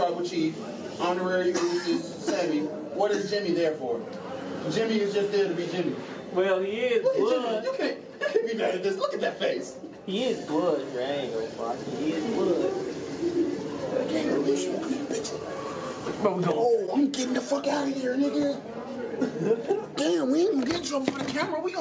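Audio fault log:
Nothing stood out on listening; no fault could be heard anywhere in the recording.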